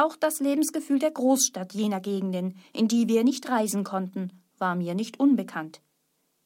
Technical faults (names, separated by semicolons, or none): none